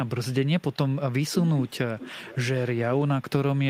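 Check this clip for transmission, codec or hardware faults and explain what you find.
The speech carries two faults tied to echo cancellation: echo leak and speech suppressed in double talk.

Echo leak appears at 0.6 to 0.76 s, 1.57 to 1.61 s, 1.99 to 2.11 s, 2.28 to 2.36 s and 2.58 to 2.66 s. The likely cause is a far-end loudspeaker whose echo canceller let residual pickup through. The first scrap trails the original by 315 ms and is very faint. The rest lag by 380 ms, loud at first, then fading. On a spectrogram, the harmonic patterns repeat shifted right by that delay. The waveform shows small displaced bursts.

Speech suppressed in double talk falls at 1.1 to 1.74 s, 2.12 to 2.35 s and 2.91 to 3.24 s. When both ends were active, the canceller likely mistook this talker for echo and attenuated everything. The voice sinks, deepest around 15 dB in the first stretch, and only slightly and then moderately in the later ones. 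The waveform envelope shows abrupt dips. The spectrogram shows fading bands.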